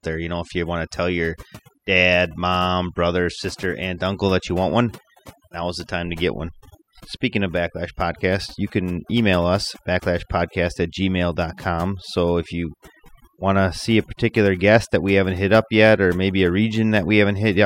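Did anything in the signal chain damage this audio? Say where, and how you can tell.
Yes, overdone noise removal in the call processing stage throughout: gaps sit near-silent with twinkling specks, and quiet spectral bands of the speech get gated off along with the noise.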